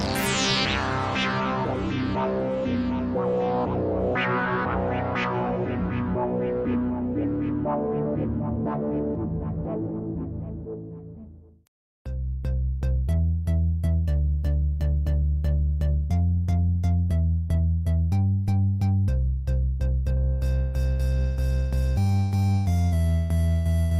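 Nothing is technically wrong with the audio; there are no faults to give times or causes for.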